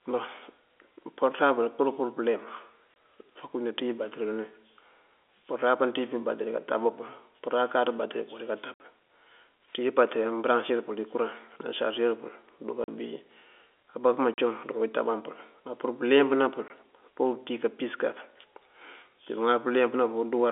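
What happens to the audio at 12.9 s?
Just before that point, from 12.84 to 12.88 s, the speech drops out for 40 ms: packet loss filled with silence. Audio packets failed to arrive and the receiver substituted digital silence, so the signal stops and restarts abruptly, leaving a short hole with hard edges. A 40 ms gap fits two lost 20 ms packets. The narrow telephone band of the G.711 coding is audible on either side of the hole.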